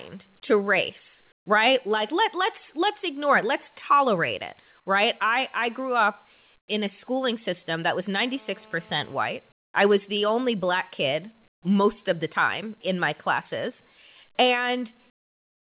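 At 1.32 s, for 140 ms, the faint room tone gives way to a flat, detail-free hiss about 19 dB quieter. The same swap comes at 6.58 s, lasting 100 ms and about 8 dB down, between "I I grew up" and "in a schooling system". This is likely comfort noise in place of the background: transmission paused in the silence, and the receiver filled the gap with synthetic noise.

From 8.27 s to 9.17 s a hard, raspy buzz at 217 Hz, rich in harmonics, sits about 29 dB under the speech. This is GSM phone buzz from a nearby handset on a call, whose radio bursts are rectified by the audio circuitry.

The featureless fill returns at 9.52 s for 220 ms, about 20 dB down, just before "I was the only". It comes back at 11.48 s for 140 ms, between "the only black kid" and "most of the time", and again from 15.1 s to the end. Both of these drops are about 18 dB. Throughout, nothing is heard above 4 kHz, which fits a narrowband G.711 call codec.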